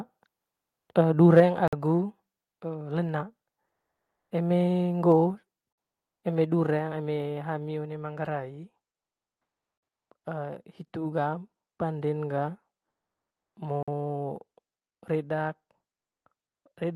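At 1.37 to 1.4 s a peak hits the converter's limit. This is microphone overload. The input level was likely set too high, so the converter ran out of headroom. The peak overshoots by about 3 dB, and around a tenth of the samples in that stretch are flattened. The tops of the waveform are sliced off. That adds a brief, harsh crackle to the syllable.

Right after, at 1.4 s, the level drops in one step of about 4 dB. This is the microphone volume stepped down. The call software likely reacted to the distorted peak and turned the device input down. Voice and background fall together, at once, with no fade. The timing ties it directly to the clipped moment just before.

At 1.68, 9.78 and 13.83 s there is a gap between chunks. Each hole lasts 50 ms. The spacing fits audio handled in 4-second chunks, with silence inserted at some joins. Nothing is missing from the signal. It is simply interrupted. 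Each gap has hard edges and sounds like a short, clean dropout in the flow.

From 3.68 to 4.3 s, 12.9 to 13.56 s and 16.47 to 16.65 s, the room tone changes. This is comfort noise in place of the background. During these pauses the sender stopped sending real audio, which points to Opus discontinuous transmission. The receiver filled the gap with synthetic hiss. The real background, already very quiet, gives way to a flat, featureless noise. It drops by about 8, 9 and 18 dB respectively.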